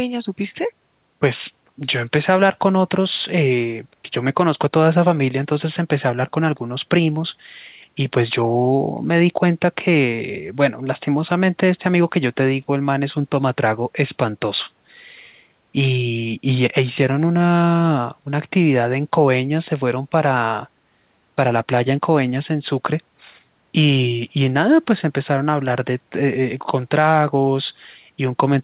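No technical faults can be heard in this speech recording. It has passed through a call path whose narrowband codec leaves nothing above 4 kHz, which fits G.711 mu-law at 64 kbps.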